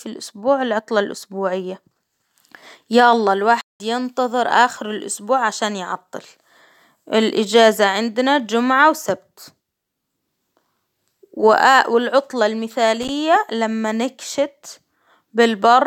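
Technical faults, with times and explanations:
3.61–3.80 s, playback stall: after "يا الله" the speech cuts to silence for about 190 ms, then resumes at "ينتظر آخر الإسبوع عشان"; likely the player starved of data.
13.01–13.09 s, loose connector crackle: a short irregular burst of scratchy crackle just before "لما نكشت", from a poor contact rapidly breaking and remaking the signal path.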